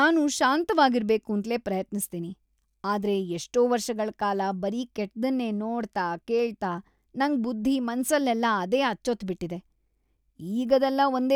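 No technical faults can be heard anywhere in the speech recording; the signal stays continuous and stable throughout.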